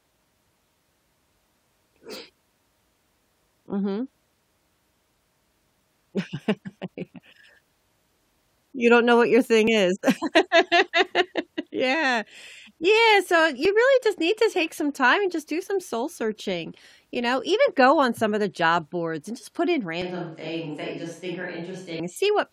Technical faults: overlap between stream segments; switch to a distant microphone

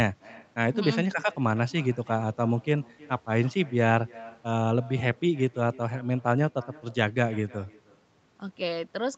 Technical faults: echo with no canceller

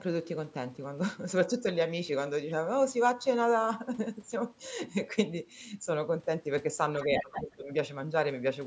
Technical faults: other side's voice leaking through; speech suppressed in double talk

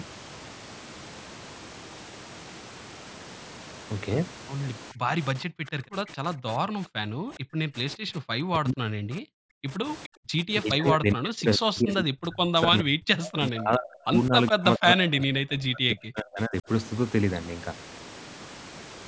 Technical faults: speech suppressed in double talk; echo leak

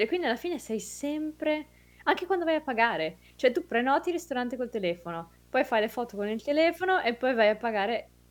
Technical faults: video or display buzz

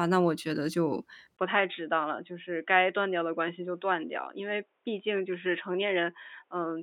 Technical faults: input switched to a poorer device

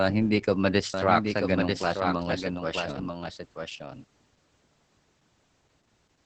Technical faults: Opus voice compression; doubled audio track

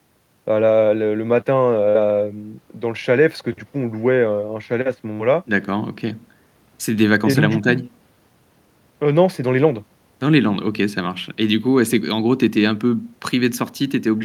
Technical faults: none

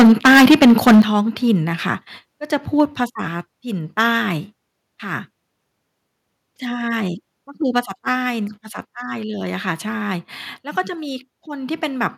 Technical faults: microphone overload; microphone volume stepped down

